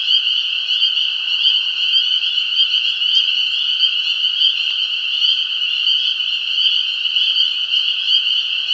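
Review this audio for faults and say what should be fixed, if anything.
No faults; nothing to fix.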